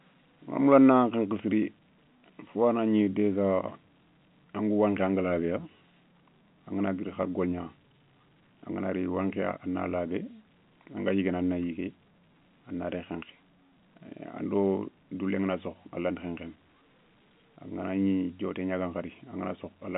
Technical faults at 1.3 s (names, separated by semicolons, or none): none